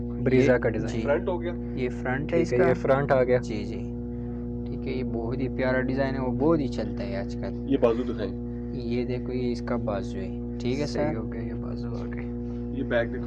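Mains hum runs through the whole clip: a steady 60 Hz tone with low harmonics, sitting only about 5 dB below the wanted sound. Power-line energy has leaked into the signal path, typically through a ground loop or a nearby transformer.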